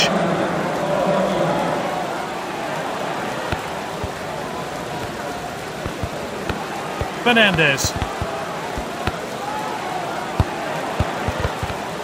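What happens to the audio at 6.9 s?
Nothing goes wrong at 6.9 s; the audio plays through that moment intact, with no dropout, click or distortion.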